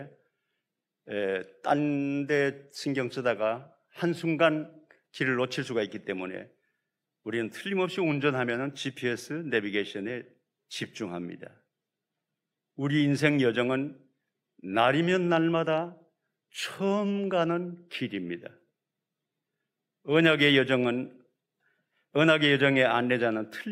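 No audible technical faults.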